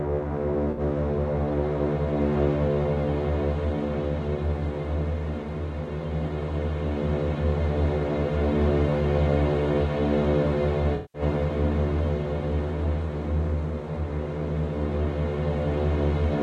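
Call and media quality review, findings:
AAC frame loss with concealment at 0.71–0.81 s and 10.95–11.22 s: the decoder fills roughly 64 ms, then 192 ms, by rebuilding from the last good spectrum.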